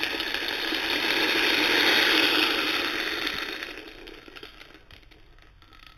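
Throughout the clip there is imaging from linear upsampling. The audio sounds as though it was carried at a low rate, consistent with 8 kHz, and then raised to 44.1 kHz by straight-line interpolation between samples. That acts as a weak anti-imaging filter. The band below 4 kHz is dulled at its top, and a mirrored copy of it sits between 4 kHz and 8 kHz, roughly 10 dB down, adding a faint metallic shimmer to sharp, bright sounds.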